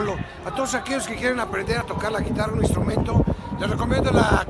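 Aliasing runs throughout: a rate drop from 48 kHz to 24 kHz skipped filtering, so content above 12 kHz folds back, leaving gritty metallic highs around -25 dB.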